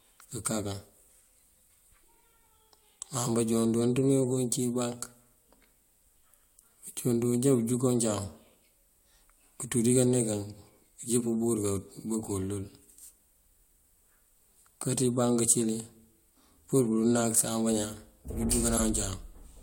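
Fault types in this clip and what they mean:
Corrupt frame decoded: near 18.75 s, about two damaged compressed frames were played anyway, putting misplaced energy into a brief chirp, squeak, blip or noise burst peaking around -15 dBFS.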